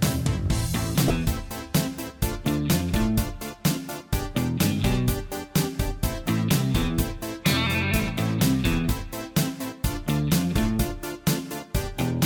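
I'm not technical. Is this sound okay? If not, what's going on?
No. There is one short glitch, at about 1.07 to 1.11 seconds. It is damaged data in a compressed stream. The file was stored in a squeezed-down format, and a small piece of it got spoiled. When playback reached that spot, the player could not read it properly. It lost its place and hunted for the next readable chunk. That is why you hear a sudden chirp or blip there. It lasts only a few hundredths of a second.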